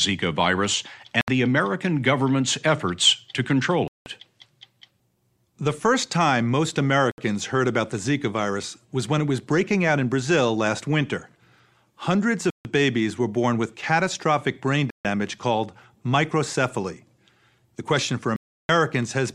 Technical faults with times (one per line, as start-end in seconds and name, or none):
1.21-1.28 Bluetooth stall
3.88-4.06 Bluetooth stall
7.11-7.18 Bluetooth stall
12.50-12.65 Bluetooth stall
14.90-15.05 Bluetooth stall
18.36-18.69 Bluetooth stall